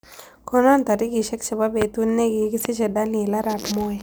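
A sudden voltage pulse, likely from a plug, a switch, static discharge or a driver glitch, gets added to the signal twice, from 1.82 to 1.84 s and again from 2.65 to 2.68 s. Each time, the circuitry downstream shapes the pulse into a single loud pop that stands well above the speech level, sharp and brief, while the speech carries on underneath without a break.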